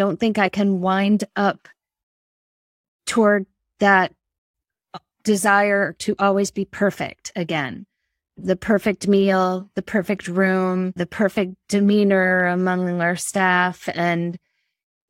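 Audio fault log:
No fault is heard in this speech clip.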